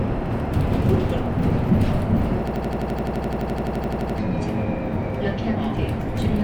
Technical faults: system hang loop

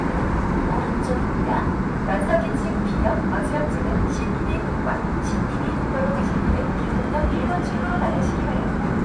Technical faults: none

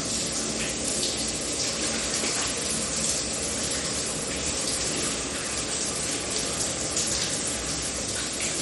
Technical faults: MP3 compression; periodic USB or driver dropouts

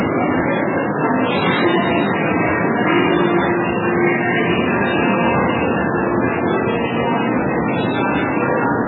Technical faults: MP3 compression

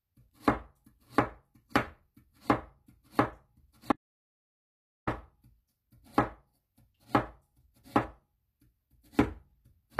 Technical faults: HE-AAC compression; audio dropout to silence

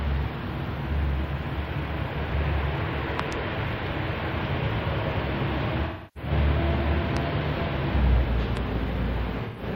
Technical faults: loud pop; AAC frame loss with concealment

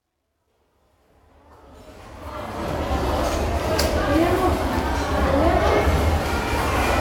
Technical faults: truncation distortion on a fade

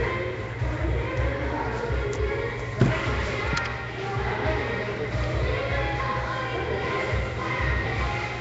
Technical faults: Nellymoser compression

